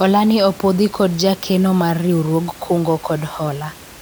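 Nothing goes wrong in the playback of this speech, and the only other thing to hear is the room's own background noise sitting about 22 dB beneath the talking.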